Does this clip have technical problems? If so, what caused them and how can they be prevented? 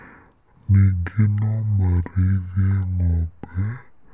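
Yes. Throughout, the speech plays at half speed and an octave low: a wrong sample rate, consistent with 16 kHz audio played at 8 kHz. Match or resample rates before playback.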